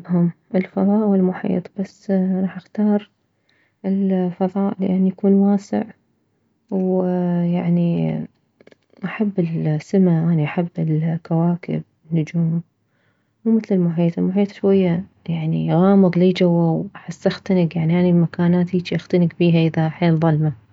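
No technical faults are audible anywhere in this recording.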